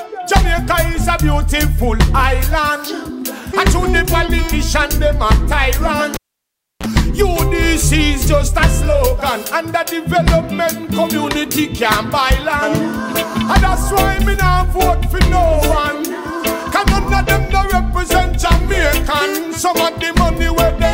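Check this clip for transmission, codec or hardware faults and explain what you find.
One hardware fault is audible: a cable pulled and plugged in, between 6.14 and 6.86 s. Contact breaks with a pop, leaving near silence for about 0.67 s. A 32 ms burst of 60 Hz mains buzz follows as only the tip touches, then a second pop on reconnection. That buzz sets it apart from a simple dropout.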